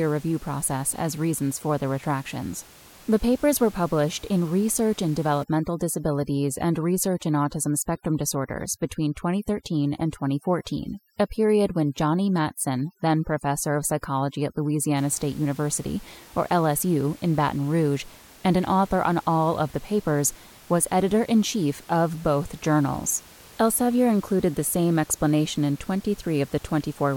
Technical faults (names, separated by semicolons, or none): overdone noise removal